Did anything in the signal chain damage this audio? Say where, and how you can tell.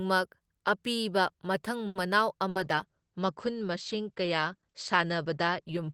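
Yes. A short stall from a late packet at 1.87–1.98 s: the jitter buffer ran dry, and the last sound was stretched for about 80 ms before resuming without loss.

A burst of packet loss at 2.49–2.58 s: about 60 ms of audio is gone, replaced by a continuation of the preceding sound that fades, then jumps ahead.

A call bitrate drop from 2.58 s to the end: the Opus codec fell from 32 to 12 kbps, cutting the bandwidth from 20 kHz to 8 kHz. It stays at its lowest for 2.41 s, leaving the sound muffled and rough.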